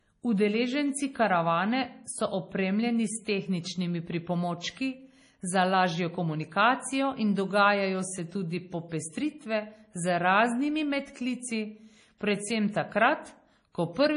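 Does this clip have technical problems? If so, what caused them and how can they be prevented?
Yes. Throughout the speech there is heavy codec damage, with weak frequency detail switching on and off between frames and no content above 10.6 kHz. The likely cause is MP3 compression at a low bitrate that fits about 32 kbps. Encoding at a higher bitrate, or keeping an uncompressed master, prevents this.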